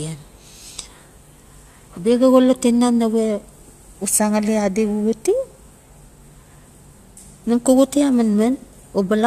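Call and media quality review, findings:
Nothing to flag on this speech recording; no faults turned up anywhere in the audio.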